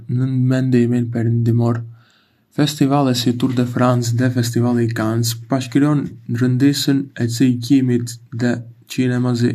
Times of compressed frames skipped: none

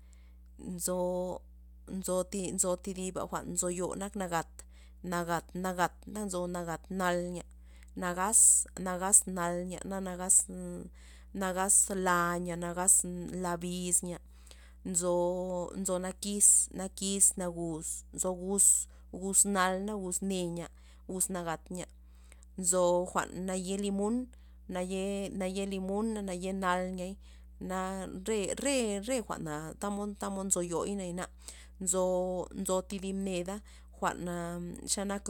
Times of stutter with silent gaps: none

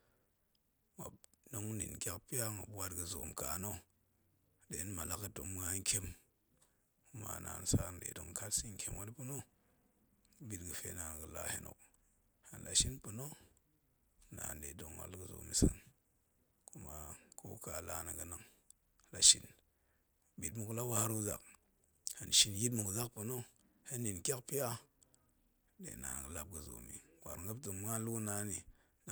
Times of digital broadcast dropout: none

